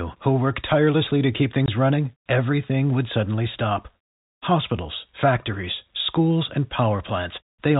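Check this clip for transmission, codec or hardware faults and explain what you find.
One transmission fault is audible: packet loss filled with silence. From 1.66 to 1.68 s, between "work tirelessly to keep" and "running everything would suddenly", the speech drops out for 20 ms, which fits a single lost packet. The receiver had no audio for that slot and played silence, so the waveform stops and restarts abruptly, giving a short gap with hard edges. The band-limited telephone sound of the G.711 coding is present throughout.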